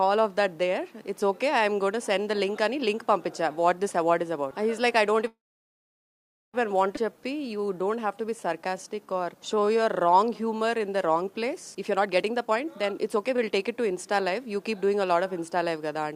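At 5.27 s the sound stalls in a call audio freeze that lasts until 6.56 s. The last bit carries on briefly and then drops to silence for about 1.18 s, 1.26 s in all. That's likely packets held up in transit until the jitter buffer ran dry. Playback then resumes exactly where it left off, with nothing lost.

Right after, at 6.96 to 6.99 s, there's a skip ahead. Roughly a second of audio is simply gone, and the two sides are butted together with only a tiny 11 ms fill. That wins back about a second of the delay built up just before.

From 7.05 to 11.50 s you get a jitter buffer slow-down. Playback runs at 90% speed with pitch unchanged, because the receiver keeps repeating single pitch periods and slices of pauses. That adds 464 ms of reserve, and you hear it as drawn-out sound.

Then it swings the other way with a jitter buffer speed-up from 11.74 to 13.35 s, running at 124%. Short chunks a pitch period or so long are trimmed over and over to shed about 0.4 s of excess delay. 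Same pitch, but it comes across noticeably hurried.

Finally, at 13.36 to 13.40 s there's a short stall from a late packet. The buffer emptied for a moment and the receiver held the current sound an extra 16 ms until the packet landed, then continued from the same spot. You hear the sound held a touch too long, with nothing missing.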